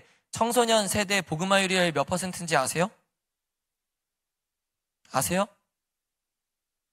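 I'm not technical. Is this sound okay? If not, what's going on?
Yes, nothing in this speech recording is at fault, so there's nothing to fix.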